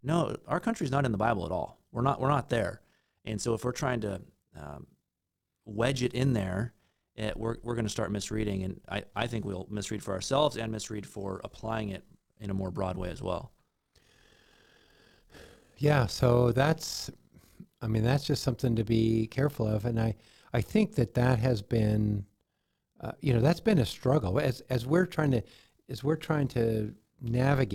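From start to finish the speech carries overlap-add ripple: frames were windowed and recombined with an overlap whose gains don't sum evenly, so level dips and swells by about 6 dB around forty times a second, a rough flutter. The waveform envelope shows regular scalloping; a spectrogram shows vertical banding.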